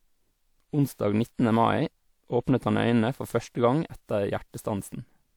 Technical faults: generation loss

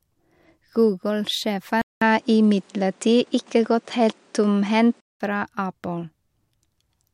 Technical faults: input switched to a poorer device

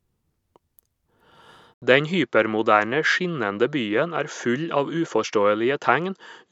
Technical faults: input switched to a poorer device

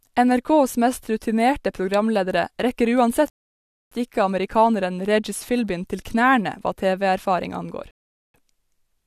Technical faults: rebuffering stall

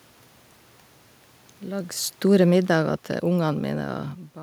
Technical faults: automatic gain falling

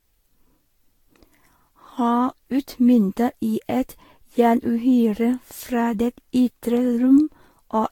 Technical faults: generation loss

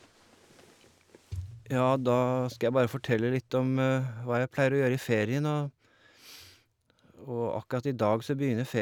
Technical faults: none

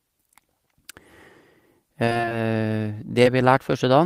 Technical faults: repeated packet loss (robotic sound); short concealed packet loss

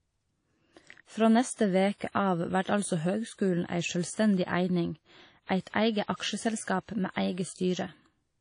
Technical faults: WMA compression

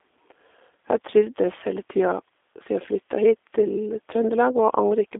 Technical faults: G.729 codec

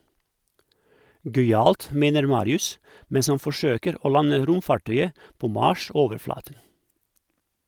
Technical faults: none

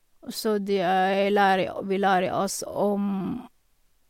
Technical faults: none

